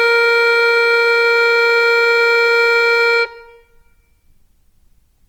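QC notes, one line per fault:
Throughout, Opus compression: tones sound rough and grainy rather than swirly, likely Opus in CELT mode at a low bitrate near 24 kbps, filling starved bands with noise or folded copies. Spectrogram shows energy up to 20.2 kHz, few holes, noisy speckled upper bands.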